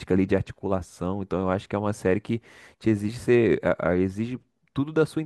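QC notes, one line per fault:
No technical faults are audible in the speech signal; level, continuity and timing hold steady across the whole recording.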